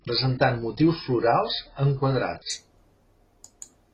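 From 0.0 s to 2.5 s the speech plays from an adaptive stream starting at a low bitrate. To begin quickly, the player picked a low-quality version of the stream and moved to a better one once it had measured the connection. Over that stretch nothing is heard above 5.5 kHz, so the treble is gone and codec artefacts are more pronounced, which fits a roughly 16 kbit/s AAC encode. At 2.5 s the quality improves abruptly with no gap, consistent with a step up to about 96 kbit/s.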